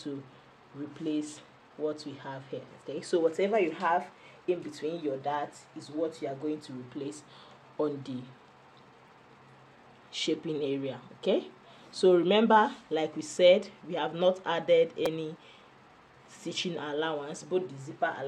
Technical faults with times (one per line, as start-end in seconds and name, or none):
9.08 repeated buffer
15.06 repeated buffer